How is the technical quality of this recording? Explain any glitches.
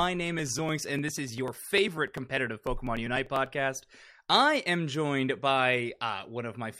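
The recording has one clear flaw: periodic USB or driver dropouts from 0.39 s to 3.46 s. About every 0.099 s, something stalls the audio path and roughly a millisecond of signal is skipped, so the waveform jumps abruptly. There are about thirty losses, heard as a steady ticking, around ten per second, that rides on the sound. A spectrogram would show evenly spaced thin vertical broadband lines, and the waveform would show matching small discontinuities.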